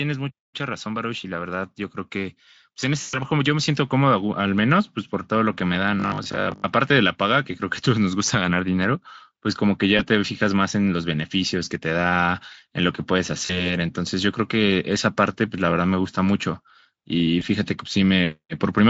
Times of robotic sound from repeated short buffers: 6.00-6.64

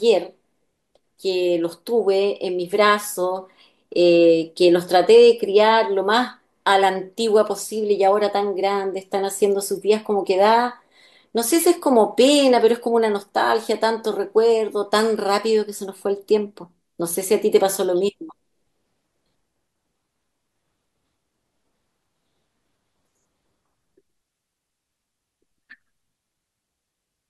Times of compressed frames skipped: none

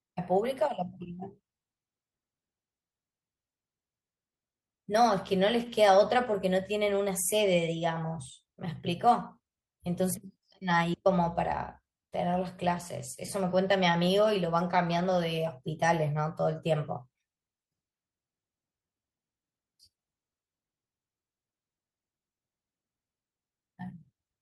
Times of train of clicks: none

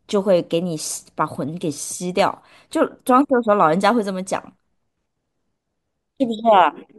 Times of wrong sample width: none

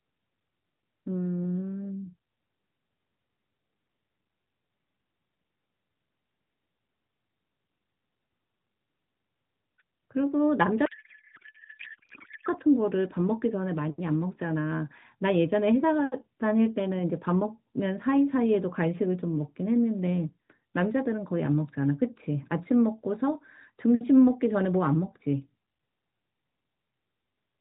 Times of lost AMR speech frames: none

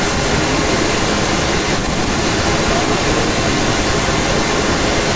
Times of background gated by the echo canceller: none

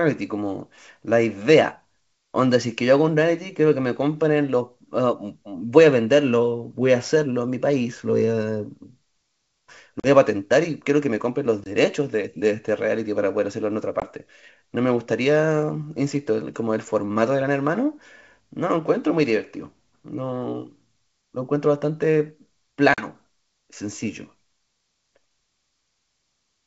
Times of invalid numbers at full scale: none

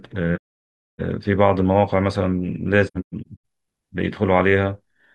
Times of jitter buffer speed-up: none

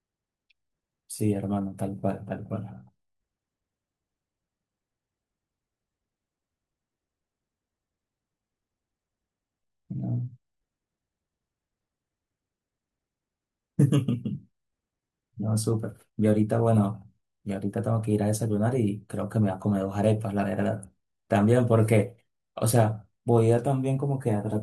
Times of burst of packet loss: none

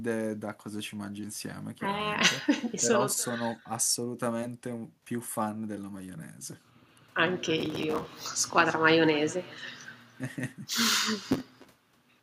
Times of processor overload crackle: 7.58-8.05, 11.21-11.96

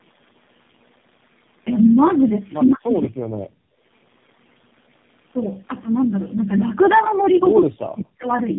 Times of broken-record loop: none

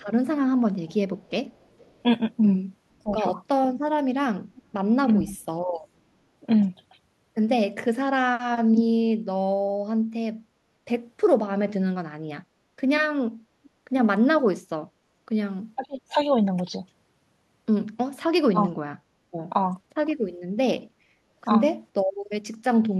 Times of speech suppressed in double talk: 3.03-3.09, 15.76-16.17, 18.53-18.57

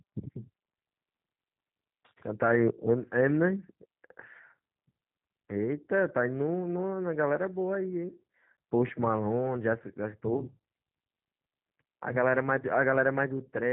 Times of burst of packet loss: none

